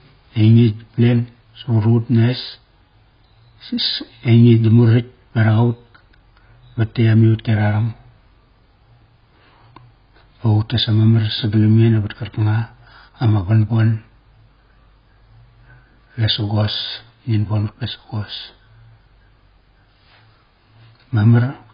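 A speech recording that has most likely been through heavy AAC compression at a very low bitrate, consistent with about 16 kbps AAC-LC. Nothing survives above 5.1 kHz, so the speech sounds dull and muffled throughout, with a smeared, warbling texture and fizzy sibilants.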